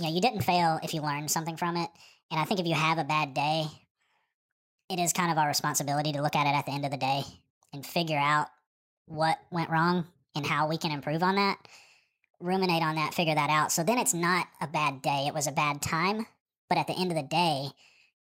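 Wrong sample rate throughout: the speech runs 1.5 times fast and about seven semitones high, which fits 32 kHz material played back at 48 kHz without conversion.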